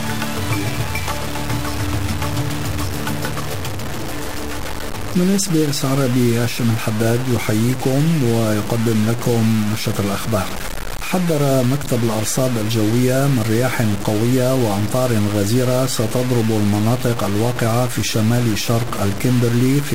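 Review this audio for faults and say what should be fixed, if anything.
Grainy distortion runs through the whole clip, tracking the sound's level; quiet passages turn gritty and the faintest parts sputter or drop out. The likely cause is low bit depth without dither: roughly 4 bits, truncated, leaving error only about 10 dB below the signal. Keep at least 16 bits through the chain and apply dither whenever reducing word length.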